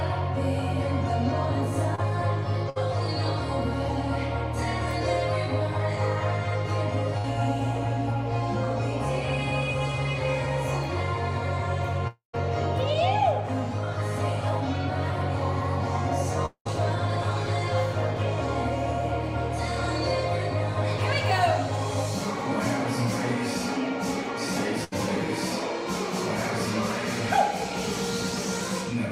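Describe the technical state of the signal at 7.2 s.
A burst of packet loss runs from 7.18 to 7.26 s. A short run of data never arrived in time, so the receiver stretched the last sound for about 59 ms while fading it down, then resumed with roughly 60 ms of the audio missing.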